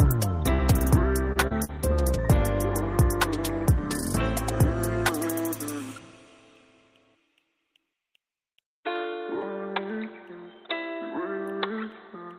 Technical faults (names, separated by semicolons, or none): short concealed packet loss